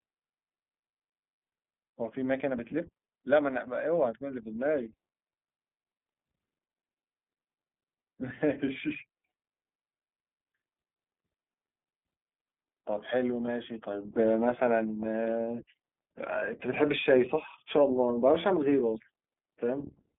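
iLBC codec coding runs through the whole speech clip. The audio is confined to a telephone band of roughly 200 Hz to 3.5 kHz, so it sounds thin and muffled with no air above that. The codec rebuilds the excitation of each frame on its own, which makes the voice plainly rough and slightly synthetic. This fits iLBC's 15.2 kbps mode with 20 ms frames.

Lost iLBC frames cause three brief dropouts: 40 ms at 10.48–10.52 s, then 20 ms at 13.46–13.49 s and 20 ms at 16.40–16.43 s. In each gap the decoder repeats the last pitch cycle blended with noise, so the sound briefly freezes into a held, faintly buzzy vowel. Because each iLBC frame decodes independently, the voice snaps back cleanly right after every gap.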